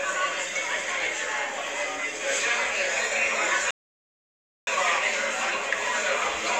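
An everyday-sound recording with one playback stall: at 3.71 s the audio cuts out abruptly in mid-flow and the output stays silent until 4.67 s, a gap of roughly 0.96 s. The break is a dead stop rather than a fade or a dip in level. The likely cause is the player running short of buffered data, or its audio thread being blocked, so that nothing reached the output until playback recovered.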